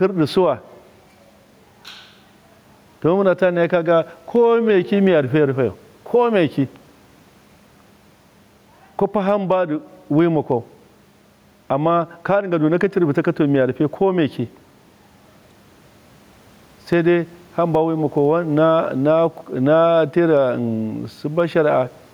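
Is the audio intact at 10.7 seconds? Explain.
No. Gain pumping runs through the whole clip, including 10.7 s. The likely cause is excessive input gain with a fast limiter clamping each loud burst, so the gain swings by around 10 dB and the sound is squashed, with the room noise normally about 42 dB below the speech.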